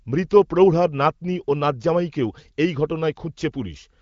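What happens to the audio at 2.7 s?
Nothing goes wrong at 2.7 s: the speech carries on intact through that moment, heard through the band-limited AMR wideband (HD Voice) codec that runs through the whole clip.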